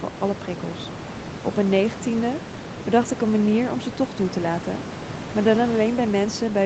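No technical faults can be heard anywhere in this speech.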